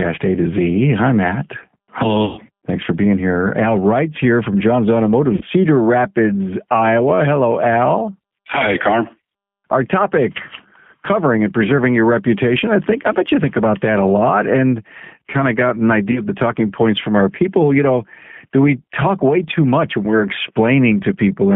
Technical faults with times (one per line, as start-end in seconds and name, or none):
0.00-21.55 G.729 codec
2.25-2.41 VoIP packet loss concealed by the speech codec
5.35-5.44 VoIP packet loss concealed by the speech codec
16.11-16.21 VoIP packet loss concealed by the speech codec